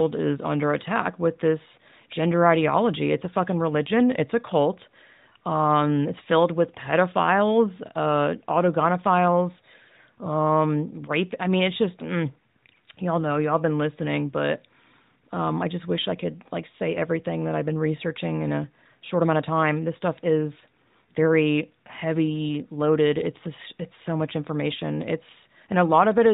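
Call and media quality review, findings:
No faults found in this speech.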